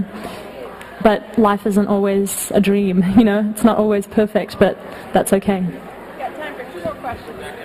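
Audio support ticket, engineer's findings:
Channel delay (comb filtering), full clip. Dull, hollow top end; fixed notch around 7 kHz. Probable cause: one channel lagging by a fraction of a millisecond before mono fold-down, which fits a delay of a few samples, so shared high-frequency content cancels.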